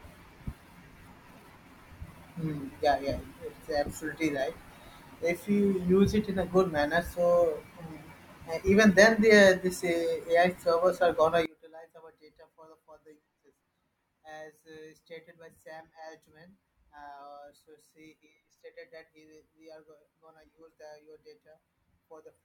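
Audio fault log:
11.46–22.45 s, one channel inverted: after "are gonna" the speech falls by about 24 dB to the end, likely from one channel's reversed polarity cancelling the centred speech in the mono sum. Unlike a plain gain drop, only the channel difference remains.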